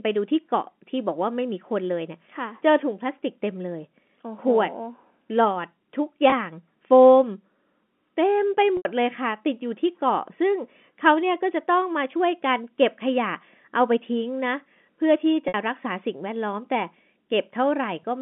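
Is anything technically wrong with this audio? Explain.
Yes. The speech has packet loss with pitch repetition at 6.3 s, 8.77 s and 15.48 s. The receiver lost about 20 ms, 80 ms and 60 ms of audio and filled each gap by repeating the last pitch period while fading it out. The 20 ms gap at 6.3 s sounds like a brief, slightly buzzy held tone. The longer gaps at 8.77 s and 15.48 s decay toward silence before the speech cross-fades back. All of this passes through the G.711 telephone band of 200 Hz to 3.4 kHz.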